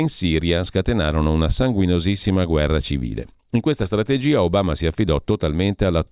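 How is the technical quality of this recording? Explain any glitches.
Nothing in the recording stood out as a technical problem on listening, so there are no glitches to explain.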